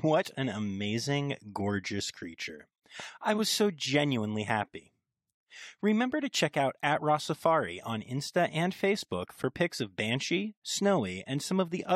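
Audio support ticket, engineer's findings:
Gap between stream segments: hard-edged silent holes of roughly 8 to 10 ms at 1.41 s (before "gorgeous creature I was") and 9.43 s (before "pics of"). Segment timestamps don't meet, so the player pads with silence. Waveform shows a flat line, spectrogram a thin blank vertical strip. Spacing fits 4 s segments.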